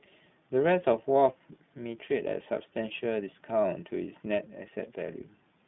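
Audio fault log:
Throughout, iLBC codec: the speech has been squeezed through a narrowband VoIP codec, so there's nothing above about 3.8 kHz and the usable band sits roughly between 150 Hz and 3.6 kHz, giving that boxed-in phone quality. The coding damage is plainly audible as a rough, slightly synthetic edge, because each short block (this fits 20 ms frames at the 15.2 kbps mode) has its excitation coded on its own with no help from the previous one.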